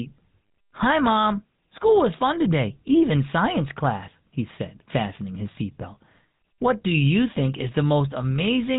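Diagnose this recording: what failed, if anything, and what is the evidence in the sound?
The speech sounds buzzy and gravelly from start to finish, and nothing reaches above 3.8 kHz. The cause is the codec stage, the GSM full-rate codec, consistent with 13 kbps: its sparse, regularly spaced pulse excitation through a vocal-tract model gives that rough texture.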